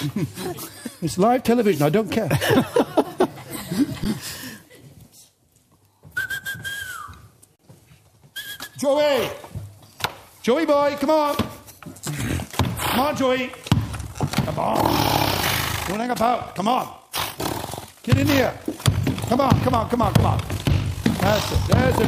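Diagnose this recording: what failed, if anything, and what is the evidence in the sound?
Underrun with held sample at the driver or buffer stage: output ran dry at 4.04 s and 7.56 to 7.59 s. The waveform freezes flat; playback then resumes where it stopped. The first gap fits a 512-sample buffer.

Overlap-add ripple in frame-based processing from 13.96 s to the end: the frame windows don't sum evenly, so the level swings about 6 dB roughly 50 times a second.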